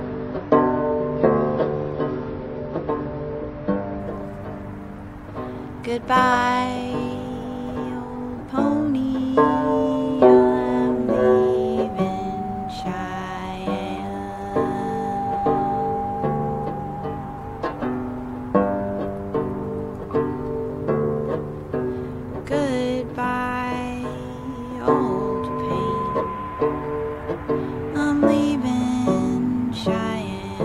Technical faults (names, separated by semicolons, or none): adaptive stream starting at a low bitrate